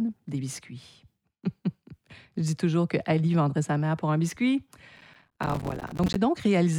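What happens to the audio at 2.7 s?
Nothing goes wrong at 2.7 s: the speech carries on intact through that moment, with no dropout, click, distortion or other audible fault.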